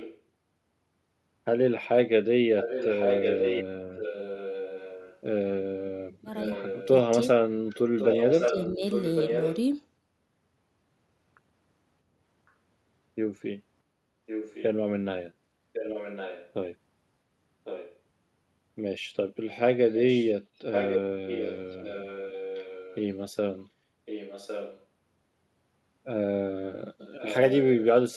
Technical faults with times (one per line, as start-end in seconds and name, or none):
0.00-0.20 echo leak
2.58-9.58 echo leak
8.51-8.82 speech suppressed in double talk
14.26-17.98 echo leak
19.96-24.83 echo leak
27.18-28.16 echo leak